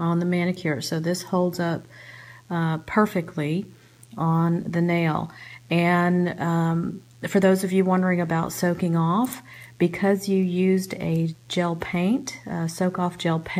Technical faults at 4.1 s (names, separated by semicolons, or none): DECT cordless phone buzz